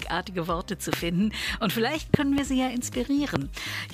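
Four loud pops cut through the sound here. The first lands at 0.93 to 0.96 s, then a quick double pop spans 2.14 to 2.41 s, and a last one sits at 3.36 to 3.38 s. Each spikes roughly 20 dB above the surrounding level while the audio carries on underneath. That sharp, thumpy character most likely comes from an electrical transient, such as a plug, switch, static discharge or driver glitch, briefly slamming a voltage step into the signal chain.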